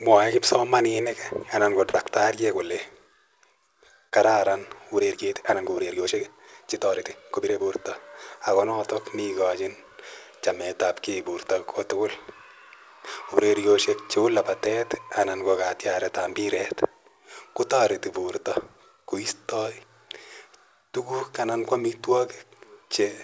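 At 1.90 to 1.96 s and again at 4.09 to 4.14 s there's a short stall from a late packet: the buffer ran dry, so a sound hangs about 38 ms and then 28 ms too long. From 4.94 to 7.76 s there's a time-stretched section, likely from software squeezing it to fit. The speech suddenly runs 1.52 times faster at the same pitch, which sounds rushed. Then, from 16.10 to 16.82 s, a jitter buffer speed-up trims around 40 ms of small pitch-period chunks, so the speech runs at 104% without shifting pitch. Through all of it, the call path's G.722 coding leaves nothing above 8 kHz.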